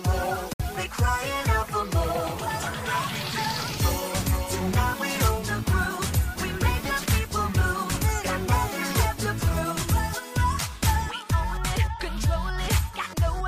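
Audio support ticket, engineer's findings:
Bluetooth dropout, 0.53 to 0.61 s. Output goes silent for about 80 ms, then resumes further on, as though playback continued through the gap. Likely wireless link: packets arriving too late for the headphones and discarded, which fits roughly three lost packets.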